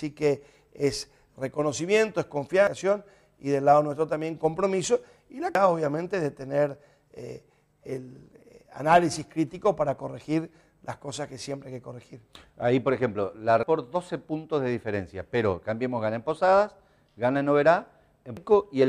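Damaged data in a compressed stream makes the decoder misread frames and resync, leaving brief chirps or blips in the audio at 2.67, 5.55, 13.63 and 18.37 s.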